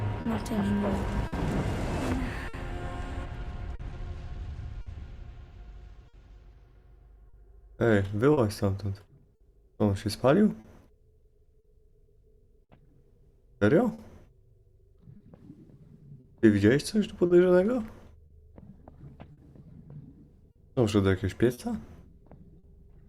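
Clock drift between sender and receiver runs through the whole clip. The sender's clock is roughly 4 percent slower than the receiver's, so the jitter buffer keeps draining and the receiver has to repeat short pieces or briefly run dry, producing small, unevenly spaced timing hiccups.

Scattered short gaps fall between 0.21 and 22.65 s, around twenty separate holes from lost or late packets. Each is filled by extending the preceding sound, the longest about 50 ms, totalling roughly a second. They come through as brief ticks, smears and stutters.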